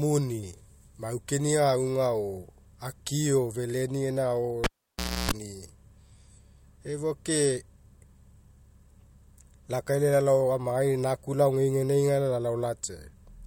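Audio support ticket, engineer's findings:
Cable pulled and plugged in, 4.64–5.31 s. Pop, about 0.62 s near-silence, including about 0.31 s of 60 Hz mains buzz as the plug tip alone makes contact, second pop on reseat. Live input cable or jack connection disturbed.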